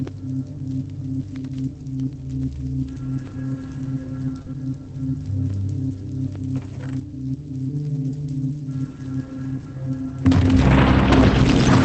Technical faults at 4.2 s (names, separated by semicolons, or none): lost packet rebuilt from error correction